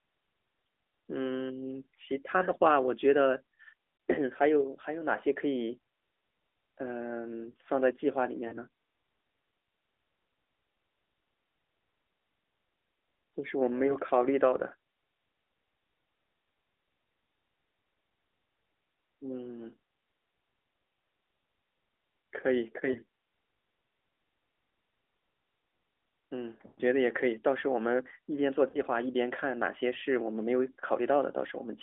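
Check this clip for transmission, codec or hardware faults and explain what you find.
The speech carries one transmission fault, lost AMR speech frames, heard at 3.98 s, 8.48–8.57 s, 13.86–13.94 s, 22.92–23.00 s, 26.68–26.81 s and 28.70–28.78 s. Radio errors corrupted frames and the decoder covered each gap by repeating the last good pitch and vocal-tract settings at falling gain. The short gaps are about 20 ms, a brief dip or warble. The 8.48 s and 28.70 s gaps are about 40 ms. At 26.68 s a roughly 100 ms run stretches the sound into a smeared, fading drone before it recovers roughly, which points to a burst of several consecutive frames. Throughout, the sound is held to the narrow 300 Hz to 3.5 kHz mobile band and has a faint synthetic edge typical of AMR narrowband coding at its top 12.2 kbps mode.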